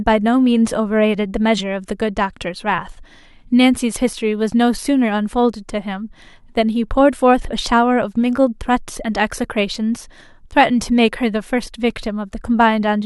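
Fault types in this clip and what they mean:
Bit error spike: a single sharp tick at 4.61 s, very short and broadband, with no relation to the surrounding speech. It peaks at about -29 dBFS and vanishes at once. Its brevity fits one corrupted sample: a single bit flipped in memory or on a digital link made that value jump by a power of two before the signal carried straight on, so the click shows up across the whole spectrum.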